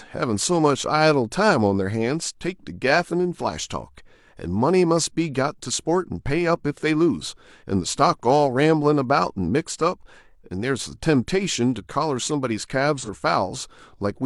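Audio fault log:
12.98–13.09 s, AAC frame loss with concealment: a brief smeared, noisy patch in the speech, consistent with a single lost frame of about 43 ms. The decoder rebuilt the gap from the previous good spectrum, so detail blurs rather than dropping to silence.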